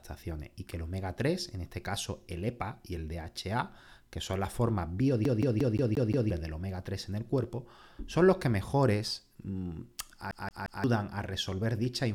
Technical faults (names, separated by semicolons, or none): CD stuck on one turn